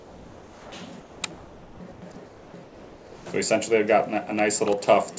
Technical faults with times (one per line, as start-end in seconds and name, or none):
0.00-0.72 comfort noise in place of the background
1.00-3.26 comfort noise in place of the background